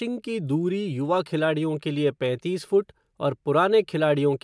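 Nothing here needs flagging: the speech runs along without any technical faults you'd hear along the way.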